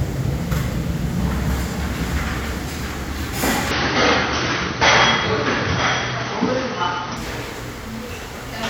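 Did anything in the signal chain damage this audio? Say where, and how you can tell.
Yes. From 3.71 s to 7.17 s the sound turns duller, with nothing above 6.2 kHz, then opens up again, with no gap at either change and no obvious jump in loudness. A faint new background hiss, well below the sound itself, sits under that stretch. On a spectrogram the upper band is sharply cut off across that block. The waveform looks continuous. The likely cause is an input switched to a poorer device at the capture stage, whose narrower band and own noise floor replaced the original microphone.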